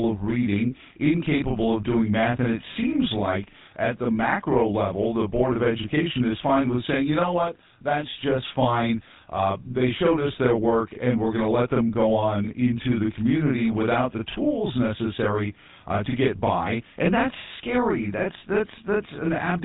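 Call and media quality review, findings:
Channel delay (doubling), whole clip: one channel arrives 40 ms late and is summed to mono with the other. The late copy sits at equal level, so every speech onset sounds doubled, a short slap trailing each syllable.

GSM full-rate codec, whole clip: pulse-driven vocal-tract coding, consistent with a 13 kbps full-rate encoder. Nothing passes above 3.8 kHz, so speech sounds muffled and narrowband. A plainly audible buzzy, gravelly roughness rides on all voiced sound.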